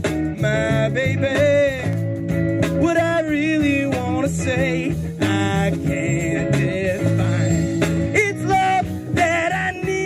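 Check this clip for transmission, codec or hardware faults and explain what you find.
One fault: CD scratch ticks, a short burst between 1.93 and 2.46 s. Five ticks of uneven strength fall at a steady spacing of roughly one every eighth of a second, the longest lasting only a couple of milliseconds. A blemish on the disc corrupts more data than error correction can repair once per rotation, so the player patches or mutes those samples. On a spectrogram they appear as thin, evenly spaced vertical lines; the waveform shows tiny notches or flattened spots.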